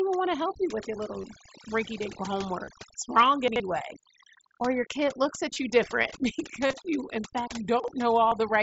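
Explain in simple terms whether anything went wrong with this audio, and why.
Three things went wrong.

Overdone noise removal runs through the whole clip. A noise cleaner was set too strong. It shuts off frequency bands it mistakes for noise, and quiet parts of the voice go too. The background drops away and breaks into twinkling, warbling specks.

Concealed Bluetooth headset packet loss happens five times. Bits of audio went missing between headset and phone. The phone filled each gap by repeating a matching piece of the sound just before it. The gaps are at 1.22 s (15 ms, between "help you with your" and "rinky dink"), 2.65 to 2.68 s (22.5 ms), 5.53 to 5.56 s (30 ms, between "your kid looks" and "you different"), 6.67 to 6.73 s (45 ms spread over 60 ms, just before "you in"), and 8.28 to 8.32 s (30 ms).

Chunks out of order happens twice. A 40 ms piece of sound arrived late and played after pieces meant to follow it. 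Nothing is lost, but the order is wrong. This leaves three hard joins and a jumbled moment. It happens at 3.48 to 3.6 s, two pieces late, and at 7.8 to 7.88 s, one piece late.

The Bluetooth mSBC headset codec underneath works as expected. It passes speech up to 8 kHz.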